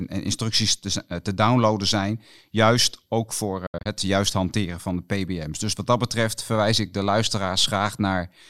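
At 3.66 to 3.86 s, after "zijn juist ook voor", the speech drops into brief silent gaps, the longest 70 ms. Lost packets likely caused this Bluetooth dropout.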